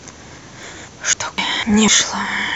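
Regular skips at 0.38, 0.63, 0.88, 1.13, 1.38, 1.63 and 1.88 s each drop around 300 ms of speech. This is likely audio missing between chunks, joined without silence.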